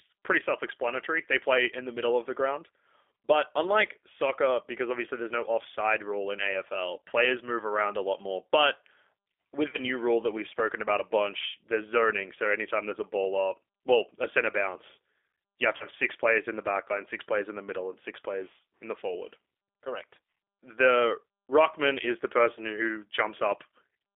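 G.729 codec, throughout: the speech is rebuilt from a filter, pitch predictor and sparse pulses at 8 kbit/s, confined to 300 Hz–3.5 kHz, sounding plainly rough and synthetic. VoIP packet loss concealed by the speech codec, at 9.71–9.77 s just before "new rule that we've" and at 15.77–15.87 s between "center bounce you have" and "six players in the": about 30 ms of audio goes missing, which fits a single lost packet each time. The decoder stretches its last pitch and filter into a fading buzzy tone or coloured noise, and the voice stays weak until it recovers.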